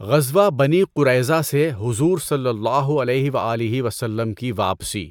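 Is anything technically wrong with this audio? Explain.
No, nothing is technically wrong with this audio. The speech comes through without any audible technical problem at any point in the clip.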